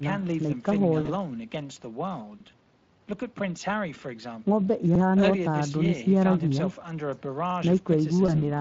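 Speech is carried through the Speex codec for the whole clip, at around 20 kbps. This CELP coder has a limited bit budget for the excitation signal that drives its vocal-tract filter, so the speech comes out with a plainly audible coded texture: grainy, somewhat noisy and hoarse, with the fine detail of the voice smeared.

At 1.01 s, VoIP packet loss concealed by the speech codec sets in. About 40 ms of audio went missing, which fits two lost 20 ms frames. The decoder filled the gap by extending its last pitch and filter settings at falling gain, so the sound there turns into a brief stretched, fading smear. Because each decoded frame depends on the one before, the voice stays weakened until about 1.09 s.

Overlapping chunks then appear at 2.40 s, 4.95 s and 7.50 s, spaced 2.5 s apart. The audio was handled in 2.5 s blocks, and each new block began 50 ms before the previous one ended, so that 50 ms plays twice at every join. 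The result is a short stutter or click at a steady interval.

At 8.26 s, a second concealed packet loss covers about 20 ms, consistent with a single lost frame. It produces a shorter fading dip that recovers by about 8.32 s.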